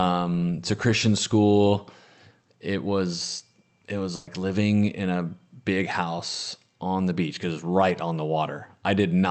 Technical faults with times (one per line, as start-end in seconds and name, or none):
4.15-4.29 burst of packet loss